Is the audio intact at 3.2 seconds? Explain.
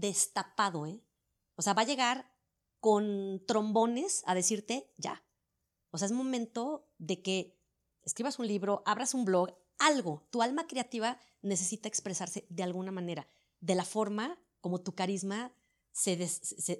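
Yes, at 3.2 seconds the speech runs on cleanly, with no dropout, click, distortion or other fault at that moment.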